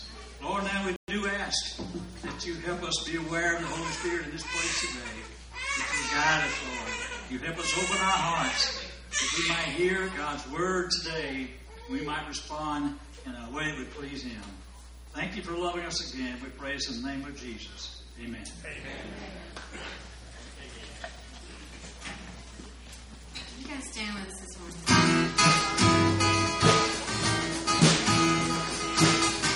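A playback stall cuts the audio at 0.96 s and leaves 120 ms of silence until 1.08 s, when the sound resumes. The waveform shows a flat, abrupt gap, and the spectrogram shows a clean blank column. The likely cause is the player running short of data or being blocked.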